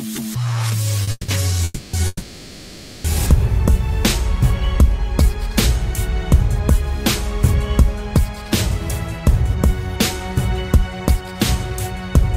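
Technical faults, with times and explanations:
1.03–1.09 s, short stall from a late packet: the last sound is held about 40 ms too long while the jitter buffer waited for a late packet, then play resumes from the same point with nothing lost. Unlike the freezes that follow, the hold is brief and never fades toward silence.
1.11–1.30 s, 1.64–1.95 s and 2.07–3.06 s, call audio freeze: the last sound carries on as a fading buzz or hiss for 170, 290 and 970 ms, each ending in 10 to 20 ms of silence. Play then resumes where it stopped, with nothing missing. This is likely because held-up packets emptied the jitter buffer. These are much longer than a single late-packet stall.
4.37–5.36 s, jitter buffer slow-down: the sound runs at about 95% speed with its pitch unchanged, and about 51 ms is added in total. The receiver repeated single pitch periods or bits of pauses over and over to rebuild its reserve. 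The result is a drawn-out stretch rather than a held sound.
10.75–11.65 s, jitter buffer speed-up: the sound runs at about 107% speed with its pitch unchanged, and roughly 70 ms is removed. The receiver cut short pieces of one or a few pitch periods again and again to shrink its excess delay, so the passage sounds hurried, the opposite of the slow-down.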